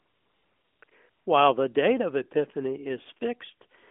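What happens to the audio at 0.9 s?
A short patch of smooth, steady hiss replaces the real background from 0.90 to 0.92 s, just after similar patches at 0.00 to 0.82 s and 0.84 to 0.88 s. This is AMR comfort noise: the phone judged the line silent, stopped sending speech frames, and the receiver filled the gap with synthetic noise built from a rough description of level and spectrum.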